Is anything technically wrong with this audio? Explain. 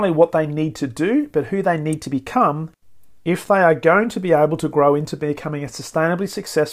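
Yes. At 1.93 s, between "do but who they" and "to become if they", an electrical switching spike snaps sharply on top of the speech, peaking around -15 dBFS. It is likely a nearby switch arcing into the line. Unlike a dropout, nothing is removed; the arc is added.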